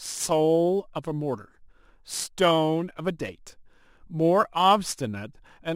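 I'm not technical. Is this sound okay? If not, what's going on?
No. Crude rate conversion runs throughout: samples were simply dropped to lower the sample rate, leaving a gritty, unrelated fizz riding on louder, brighter speech.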